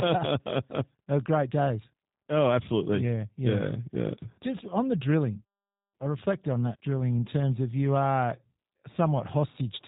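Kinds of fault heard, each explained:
G.729 codec: throughout, speech is rebuilt from a vocal tract model and a few pulses, so it sounds rough and synthetic, with nothing above 4 kHz, fitting 8 kbit/s.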